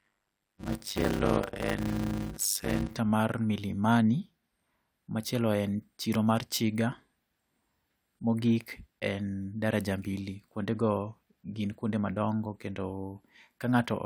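From the start of the clip to about 2.95 s, a block size mismatch (padded) means a stage delivers blocks of about 256 samples into reads nearly twice that size, with zeros filling the remainder. The speech gains a 100 Hz buzz and runs at 0.533 times normal speed, timbre roughly unchanged.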